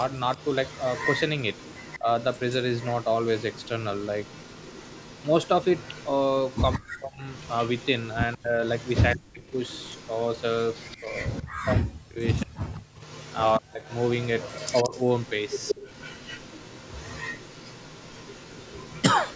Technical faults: echo leak; speech suppressed in double talk

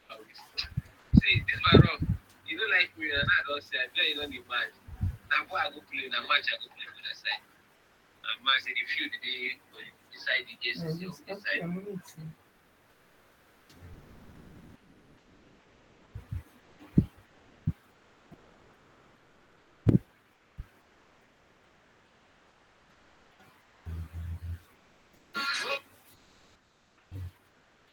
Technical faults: comfort noise in place of the background; onset clipped by the voice detector; sound chopped by the voice detector

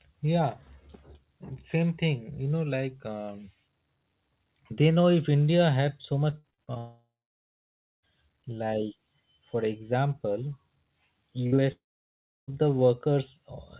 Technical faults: repeated packet loss (robotic sound); long network dropout; burst of packet loss; short concealed packet loss

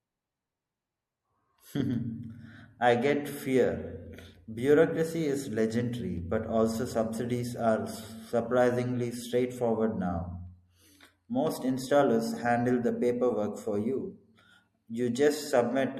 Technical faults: MP3 compression

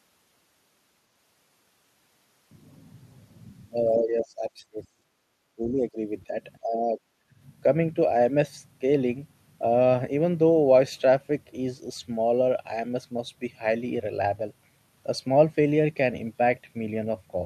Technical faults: speech suppressed in double talk; background gated by the echo canceller

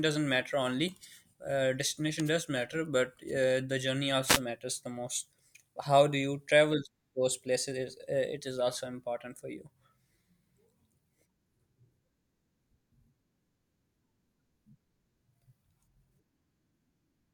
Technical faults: wireless microphone noise hit

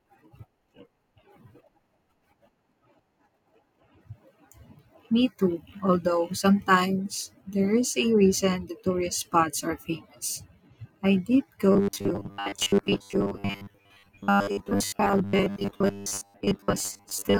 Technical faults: robotic sound from repeated short buffers

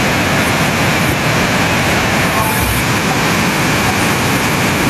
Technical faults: none

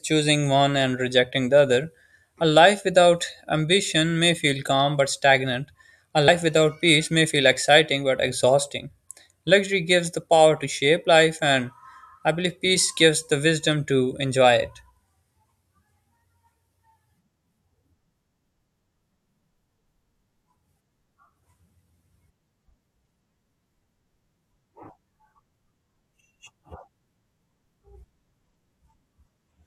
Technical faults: compressed frames skipped

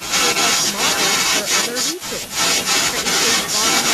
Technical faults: speech suppressed in double talk; echo leak

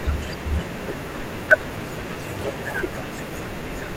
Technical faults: periodic USB or driver dropouts

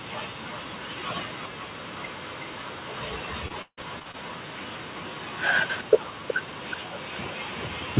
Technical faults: echo leak; repeated packet loss (robotic sound)

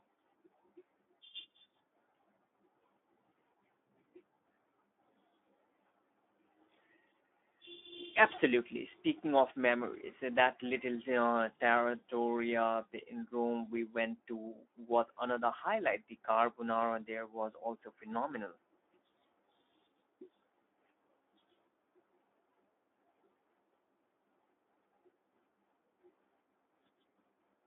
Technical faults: Speex codec

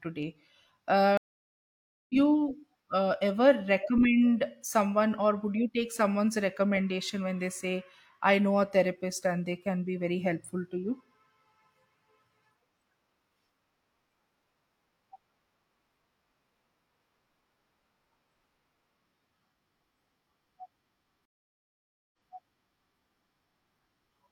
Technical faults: stream reconnect

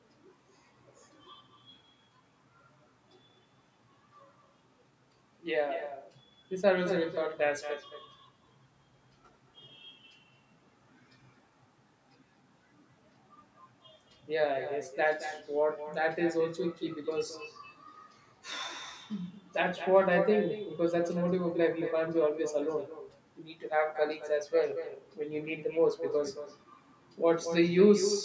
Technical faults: echo with no canceller

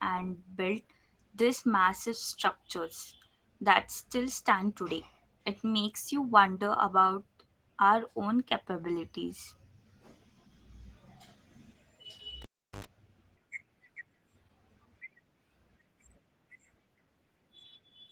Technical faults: Opus voice compression; cable pulled and plugged in

